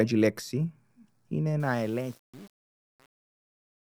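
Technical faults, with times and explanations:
1.6 to 3.93 s, truncation distortion on a fade: the gain stage applying the fade-out, which begins around 1.6 s, drops the low-order bits without dither, and the coarse steps suggest only about 7 bits are left. As the speech level falls toward the smallest step, the waveform collapses into a few square-edged levels instead of shrinking evenly. The tail therefore turns gritty and buzzy through to the end.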